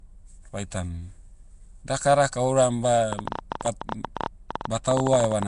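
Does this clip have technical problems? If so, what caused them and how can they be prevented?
Yes. Throughout the clip, the audio was likely passed through the Nellymoser Asao codec, the old Flash microphone codec. It spends a fixed small budget of bits on each short block and replaces weak bands with noise, and the degree of damage points to a rate of about 44 kbps. You hear this as a rough, hissy halo around the speech and a smeared, underwater quality, with nothing above 10.6 kHz. To prevent it, record or transmit with a modern codec such as Opus or AAC, or keep the audio uncompressed.

From 3.13 s to 5.44 s, just after "dakadaka ouram", a train of clicks rides over the speech. It likely comes from electrical interference from nearby equipment or from a faulty connection or power supply. Short pulses of much the same shape arrive irregularly, about 13.5 per second and about thirty in all, with peaks around 15 dB above the speech. 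They are heard as ticking and popping that continues through the pauses. To prevent it, move the setup away from the interfering equipment, check the cables and grounding, and use a stable power supply and connection.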